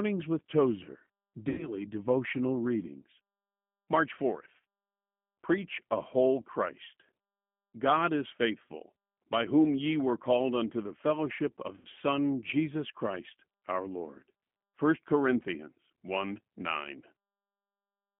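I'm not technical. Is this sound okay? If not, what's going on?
No. The whole recording went through the G.729 codec, a low-data phone-call format. It rebuilds the voice from a rough model, so speech sounds thin, slightly rough and synthetic. Everything above about 3.4 kHz is missing, which gives it a muffled telephone quality.

There are also two moments of VoIP packet loss concealed by the speech codec. Pieces of the call went missing, and the decoder guessed, stretching the last sound into a buzzy tone or a coloured noise that fades. It happens from 1.49 to 1.75 s, just before "devotional readings", and from 11.76 to 11.87 s, just after "unto the fellowship of".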